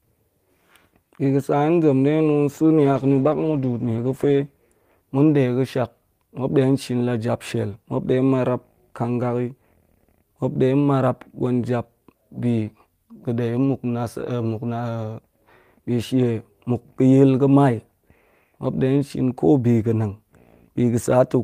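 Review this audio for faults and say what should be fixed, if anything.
A call bitrate drop runs from 2.84 to 4.47 s. The bandwidth estimate fell and the encoder coded more coarsely, holding its lowest rate for 1.56 s. The audio turns rough and muffled with the highs cut, which fits a fall from 32 to 13 kbps. A steadier bandwidth estimator with a higher minimum bitrate would prevent it.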